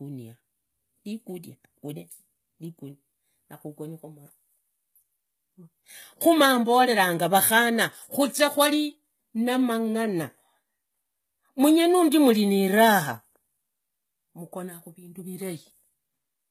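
Throughout, the upper treble sounds synthetic, with gritty, lispy sibilants and nothing above 14.9 kHz, likely from HE-AAC compression rebuilding the treble from copied lower bands.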